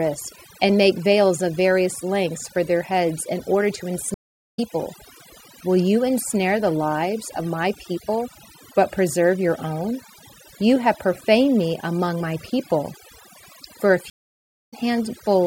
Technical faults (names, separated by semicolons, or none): overdone noise removal; stream reconnect